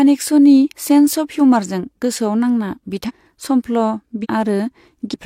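At 3.05, 4.20 and 5.10 s, compressed frames are skipped. The speech jumps ahead by roughly 0.3, 0.5 and 0.3 s, in multiples of 42.7 ms frames.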